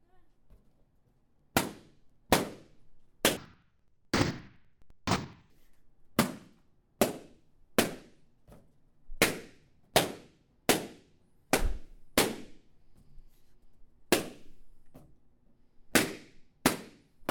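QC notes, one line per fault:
3.37–5.57 s: interleaved audio read as planar. The sound drops a full octave and turns doubled and choppy, with a stutter at about 11.7 Hz. Each 85.33 ms chunk, which fits a 4096-sample block, had its alternating left-right samples split down the middle, so the first half went to the left channel and the second half to the right. Each half then plays at half speed, giving the octave drop. Both halves play together, so the pace stays right but the two halves of every chunk are heard at once, overlapped.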